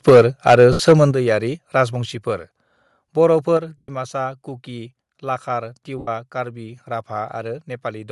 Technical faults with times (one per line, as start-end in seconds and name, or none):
0.00-8.12 Bluetooth LC3 compression
0.08-0.21 microphone overload
0.10 microphone volume stepped down
0.47-1.04 microphone overload
0.72-0.80 lost LE Audio frames
1.11 microphone volume stepped down
2.13 microphone volume stepped down
3.57 microphone volume stepped down
3.77-3.89 lost LE Audio frames
5.98-6.08 lost LE Audio frames